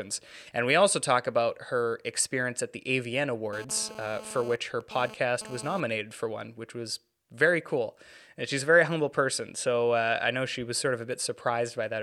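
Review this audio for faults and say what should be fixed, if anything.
A 2G phone near the recording chain was transmitting in bursts about 217 times a second, and the audio circuitry rectified those radio pulses into the signal path. The result is GSM phone buzz from 3.53 to 5.80 s, just before "for one which was": a hard, raspy 217 Hz buzz with many harmonics, sitting about 16 dB below the speech and unrelated to it. Because the phone was transferring data rather than holding a call, the buzz comes and goes. To prevent it, keep phones off or in flight mode and well away from microphones, cables and interfaces while recording.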